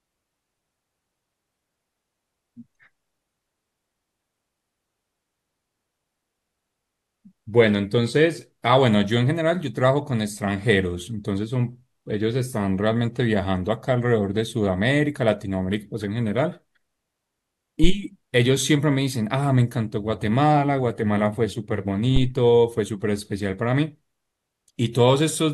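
Speech with two phantom power thumps, at 17.84 and 22.16 s: deep supply-switching pulses peaking at about -5 and -8 dBFS, decaying in 29 and 41 ms. Unlike plosives, they are independent of the speech.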